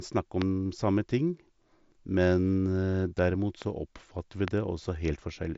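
Sharp single pops cut through the speech at 0.42, 3.62 and 4.48 s, the first and last very loud and the middle one softer. These loud pops likely come from a brief voltage spike, and the speech continues underneath. The audio is band-limited below about 7.7 kHz, consistent with an mSBC Bluetooth headset link.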